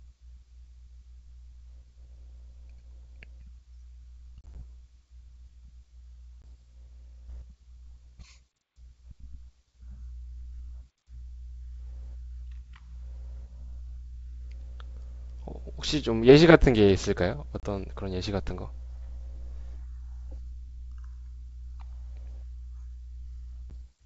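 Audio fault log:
4.41–4.64 s, 6.42–6.46 s, 17.60–17.65 s, 23.70 s: packet loss on an ADPCM call. Lost packets became abrupt silent gaps (about 50 ms across 140 ms first, then 20, 30, 10 ms), and the decoder's predictor and step size drifted from the sender's, so speech resumes with a click, distortion or wrong level before resettling.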